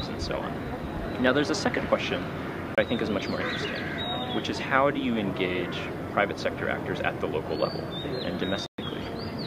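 At 2.75 to 2.78 s the sound drops to silence for 28 ms, then returns. At 8.66 to 8.79 s a longer gap of 120 ms follows. Both are likely a Bluetooth stall: interference delayed packets, the headphone buffer emptied, and playback paused until they arrived.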